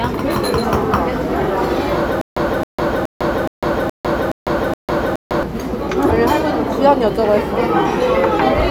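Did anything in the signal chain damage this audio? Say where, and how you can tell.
Yes: stutter with silent gaps from 2.21 to 5.43 s, a 268.5 ms fragment repeating seven times with 152 ms digital silence between, likely a stalled playback buffer.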